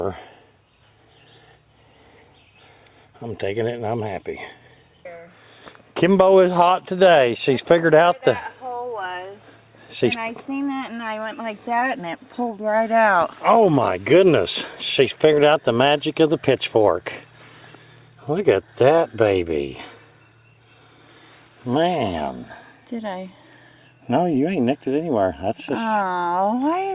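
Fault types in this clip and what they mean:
No audible faults turn up anywhere in this recording.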